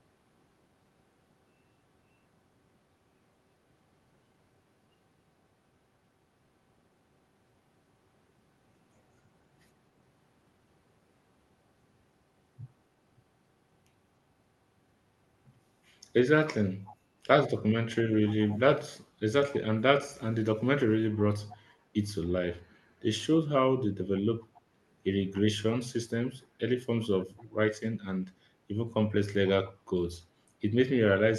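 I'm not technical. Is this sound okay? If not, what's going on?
No. There is an echo leak: faint, brief scraps of the speech come back about 0.28 seconds late at 16.87, 21.49, 24.54 and 27.37 seconds. This is likely a speakerphone echo canceller letting sound slip through. Unlike room echo, these are separate, short repeats.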